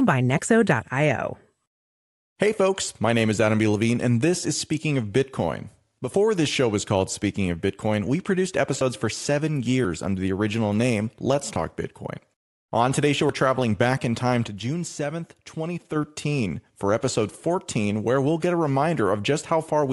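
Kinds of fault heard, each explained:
Bluetooth LC3 compression: Across the whole speech clip there is a clearly audible breathy, grainy edge, with the upper spectrum thin and hissy rather than crisp. This is likely Bluetooth LC3 coding at a modest rate, which fits about 48 kbps with 10 ms frames. The codec runs short of bits for the top band, so it discards much of that detail and fills the gaps with shaped noise.
One channel drops out: The sound falls abruptly by about 6 dB from 5.98 to 6.14 s, recovering just before "this show was called". It falls again from 14.48 to 15.96 s, right after "traveling back in time". The likely cause is one stereo channel briefly disappearing. Once the two channels are summed to mono, material shared by both loses half its contribution, so the level drops by that amount until the missing channel returns.
Lost LE Audio frames: At 11.55 s a brief patch of the speech turns into a noisy smear instead of clear sound, lasting about 10 ms. 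This is a single lost LE Audio frame. With no data arriving for that slot, the LC3 decoder rebuilt it from the previous frame's spectrum with randomised phase. That keeps the level roughly right but scrambles the detail, so it is heard as a short grainy blur.
Dropped buffer (overrun): At 13.29 s, between "today's show" and "traveling back in time", there is a sudden jump forward in the speech and no gap of silence. About 40 ms of audio goes missing. This is likely an input overrun. The capturing software fell behind and the hardware overwrote samples it had not yet collected, so the two surviving edges were spliced straight together.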